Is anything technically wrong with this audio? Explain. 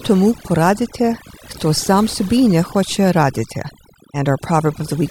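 Yes. The speech suffers from overdone noise removal across the whole clip. A noise reduction stage set too aggressively has pushed individual frequency bands down or out whenever they sat close to its noise estimate, taking the softer parts of the voice along with the noise. Pauses fall to near silence scattered with twinkling specks. Unlike low-bitrate codec swirl, the artefacts track the noise floor, clustering in quiet gaps.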